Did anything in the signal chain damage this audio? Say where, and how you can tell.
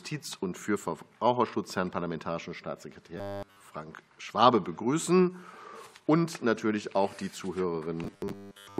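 Yes. The damage is at the driver or buffer stage, most likely a buffer underrun causing robotic sound from repeated short buffers. From 3.18 to 3.63 s the sound becomes a rigid, metallic buzz at a fixed 100 Hz, with essentially all of it replaced by repeats. From 8.04 s to 8.79 s the same buzz returns, covering most of the stretch. A 100 Hz pitch fits the same 10 ms block being replayed while fresh audio is skipped.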